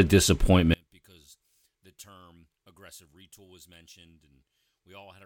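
Speech that collapses from 0.74 s to the end, falling about 35 dB to a faint trace, likely because one channel is inverted and cancels the centred voice in mono.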